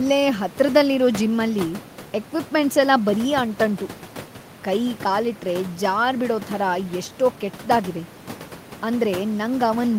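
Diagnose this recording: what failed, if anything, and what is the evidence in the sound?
Nothing stood out on listening; the only thing beneath the speech is the room's own background noise, sitting about 18 dB below it, which belongs to the recording space rather than to any stage of the system.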